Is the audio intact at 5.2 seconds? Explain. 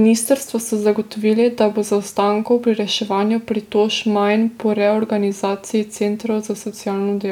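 Yes, the audio is intact at 5.2 seconds, with no audible fault at that point in the speech.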